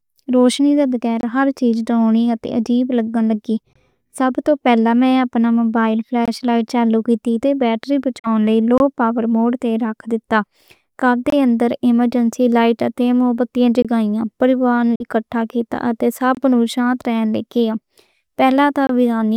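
Speech with brief holes of about 23 ms recurring every 2.5 s, at 1.21, 3.73, 6.26, 8.78, 11.30, 13.82, 16.35 and 18.87 s: a gap between chunks, where silence is inserted at each join. Two longer silences, at 8.19–8.27 s (between "تے بیٹری" and "لئی لو پاور موڈ") and 14.95–15.03 s, resume as if the speech had kept playing, which points to a likely Bluetooth dropout where late packets were discarded.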